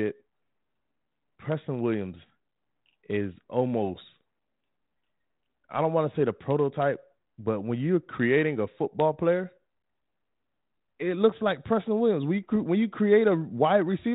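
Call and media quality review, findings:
Brief pop with a rough edge at 4.21 s; bit errors on the ADPCM link, error rate under a tenth of a percent, each flipped bit knocking the decoder's step size and predictor off so the damage rings briefly.

Rough burst with a short level change, 12.43 to 12.50 s; same ADPCM bit errors, denser (around a fifth of a percent), five frames hit. Underlying G.726 at 32 kbit/s, band-limited below 4 kHz.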